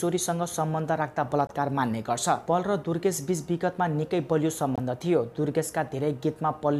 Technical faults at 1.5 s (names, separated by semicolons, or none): Bluetooth dropout